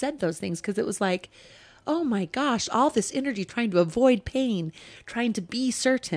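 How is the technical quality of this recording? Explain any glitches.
Listening to the recording, nothing stood out as a technical problem or glitch.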